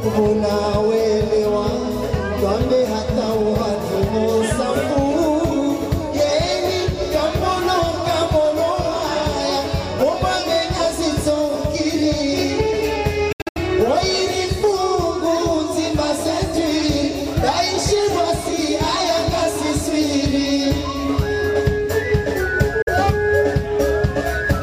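At 5.84 s the sound jumps forward by just a few milliseconds, with no gap in between. That's most likely a dropped buffer (overrun): the software didn't grab its samples before the hardware wrote over them, so a short stretch vanished and the two sides got spliced together. The waveform doesn't line up at the join.

From 13.32 to 13.57 s the sound breaks up into a stutter of silences, about 186 ms missing in total, spread across roughly 232 ms, with the longest hole around 70 ms. It then picks up further along, as though it kept playing through the gaps. The same thing happens more briefly from 22.82 to 22.88 s, with about 46 ms lost. Both are likely a Bluetooth dropout, where packets didn't reach the headphones in time and the output simply went quiet until good ones arrived.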